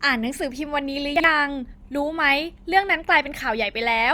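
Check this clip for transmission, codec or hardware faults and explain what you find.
One transmission fault is present: chunks out of order, between 1.16 and 1.24 s. Two 40 ms blocks of the speech arrive swapped, the first landing one chunk late, so it plays after the block that should follow it. No audio is missing, but the sequence is broken and the waveform is discontinuous at three joins. The result is a brief jumbled moment of about 80 ms.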